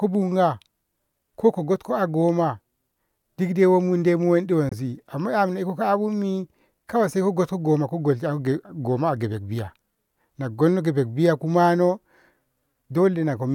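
A speech clip with a brief silent gap from 4.69 to 4.73 s, with speech resuming as if it had played on: a Bluetooth dropout, likely from one late packet dropped before reaching the headphones.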